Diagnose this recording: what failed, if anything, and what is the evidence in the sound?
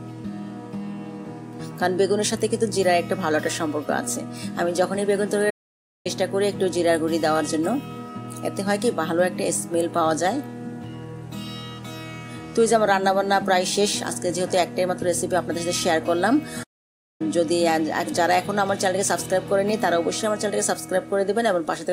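Playback stall: the player likely ran out of data, so output falls silent mid-flow at 5.50–6.07 s and 16.63–17.21 s, roughly 0.55 s each.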